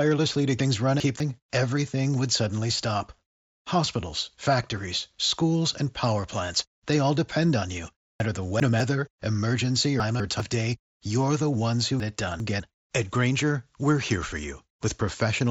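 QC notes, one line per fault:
0.6–1.2 s, 8.2–8.8 s, 10.0–10.4 s, 12.0–12.6 s: chunks out of order. A 200 ms slice plays one or two slots late, so each spot sounds briefly jumbled. The first lands just before "everything would suddenly stop", and the second just after "all depend on you".
3.86 s: concealed Bluetooth headset packet loss. A single 7.5 ms frame dropped on the mSBC headset link and was patched by repeating the preceding waveform, so it's nearly inaudible, just before "factories schools and power".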